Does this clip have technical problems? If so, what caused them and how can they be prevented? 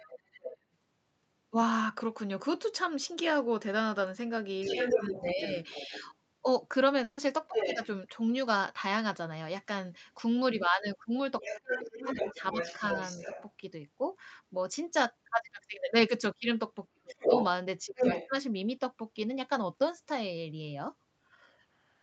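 Yes. Four stretches show the other side's voice leaking through: 0.00–0.58 s, well below the main talker; 4.62–7.86 s, roughly as loud as the talker; 11.41–13.43 s, a little below; and 17.13–18.29 s, slightly louder. A second voice is audible alongside the main one. The likely cause is loudspeaker playback reaching the microphone and the echo canceller failing to remove it. Prevention: use a headset, or give the echo canceller a correctly aligned reference signal and a stable playback path.

Speech is suppressed in double talk at 4.92–7.81 s and 11.50–13.28 s, dipping by around 10 dB for about 0.4 s and 0.5 s in total respectively. At 16.93–18.31 s it drops much harder, by roughly 35 dB, for about half a second in total. Each dip coincides with the other side talking at the same time. The canceller likely cannot tell the local talker from the echo, so it turns both down. Prevention: stop the echo reaching the microphone in the first place so the suppressor has less to remove.

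A burst of packet loss at 7.03–7.19 s removes 140 ms of audio. The receiver fills the gap by stretching and fading the last sound it had, then resumes later with that section missing. This points to several consecutive packets lost or arriving too late for the jitter buffer. Prevention: improve network stability, or use a larger jitter buffer with in-band forward error correction.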